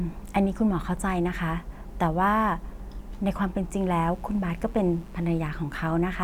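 From 3.72 s to 5.53 s a mains buzz sits well below the speech: switching spikes at twice the 60 Hz mains rate leak in, spraying harmonics into the kilohertz range. Unlike a smooth low hum, it sounds steady and raspy.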